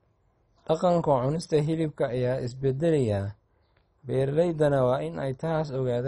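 From start to finish the speech sounds dull and gurgling, with a granular roughness. Nothing survives above 10.4 kHz. Upper bands flicker on and off, and the rest are coarsely quantised. This points to heavy MP2 compression, likely at a very low bitrate.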